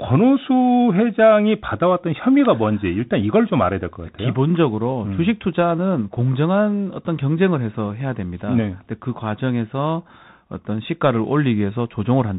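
Speech passed through a Bluetooth CVSD headset codec, whose one-bit up-or-down coding, consistent with a 64 kbps link, caps the band near 4 kHz. Throughout, the speech sounds muffled, s sounds turn scratchy, loud bright passages distort, and a granular hiss sits underneath.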